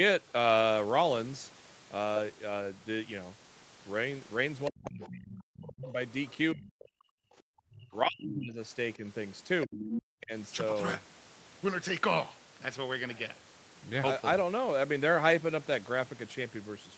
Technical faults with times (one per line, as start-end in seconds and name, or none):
4.65-5.08 other side's voice leaking through
4.70-5.98 speech suppressed in double talk
5.70-6.70 other side's voice leaking through
6.53-9.04 speech suppressed in double talk
7.33-7.41 other side's voice leaking through
8.31-8.36 other side's voice leaking through
9.65-10.02 other side's voice leaking through
9.66-10.33 speech suppressed in double talk